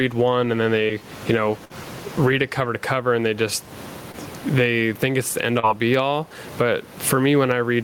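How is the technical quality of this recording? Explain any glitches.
The quality is compromised by level pumping throughout and several network dropouts, with room noise sitting about 32 dB below the speech.

Gain pumping: the level rises and ducks with the speech, swinging around 20 dB. The likely cause is input gain set too high, with a fast limiter pulling it back on loud sounds. The waveform envelope looks flattened, with the background lifting in the pauses.

Short concealed packet loss occurs at 0.87–0.91 s (after "one and then", before "you know read it"), 4.12–4.15 s (after "cover and they just", before "they think it's the") and 5.59–5.65 s. Audio failed to arrive in time, and the decoder extended the previous sound for 16 to 35 ms before blending back, giving a brief smear. A spectrogram shows smoothed, repeated content over a short stretch.

Burst of packet loss: at 1.65–1.72 s, between "you know" and "read it cover to", about 40 ms of audio is missing. 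The receiver filled 46 ms by continuing the last sound while fading it, producing a held buzz or hiss. A spectrogram shows a static, decaying band followed by a jump in content.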